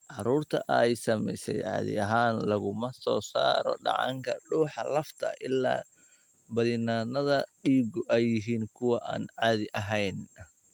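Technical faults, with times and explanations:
No technical faults can be heard anywhere in the speech. There are no times to give and nothing to explain.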